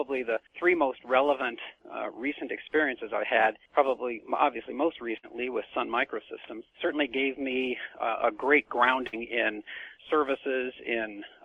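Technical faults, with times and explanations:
5.17 to 5.26 s and 9.07 to 9.16 s, burst of packet loss: in each, a short run of audio never arrived in time. The receiver extended the last sound and faded it for about 55 ms, then jumped ahead, leaving roughly 60 ms of sound missing.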